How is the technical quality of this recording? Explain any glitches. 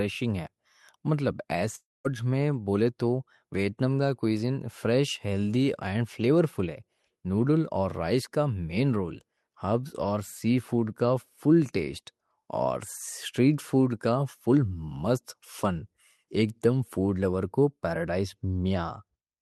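The speech clip has one clear glitch, from 1.75 to 2.06 s. The sound is carried on as a fading buzz or hiss, drops to about 0.21 s of silence, then resumes at "میں بولے" with roughly 0.3 s of speech missing. This is likely a long network dropout. The receiver filled the gap with concealment and then gave up. Throughout the clip the call codec's coding noise is audible, and the high end stops near 12 kHz.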